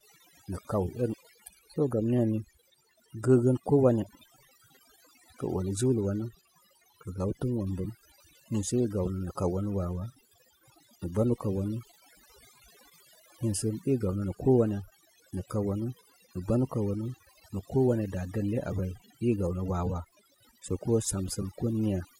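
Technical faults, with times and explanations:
Throughout: overdone noise removal. The speech carries the marks of a noise reduction stage pushed much too hard. Frequency bands that sit close to its idea of the background noise are driven down or shut off entirely, so the pauses collapse into near silence scattered with twinkling specks. The same gating catches the quieter parts of the voice, stripping away softer detail.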